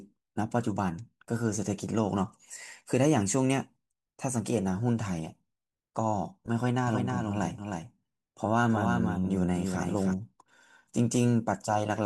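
From 6.87 s to 10.13 s the speech carries a doubled audio track. A second, full-band copy runs about 300 ms behind the original, roughly 5 dB quieter. It has no decay or room colour, so it sounds like a flat repeat rather than an echo. It cuts in abruptly at 6.87 s and stops just as suddenly at 10.13 s. The likely cause is a second capture through a slower path being mixed in with the first.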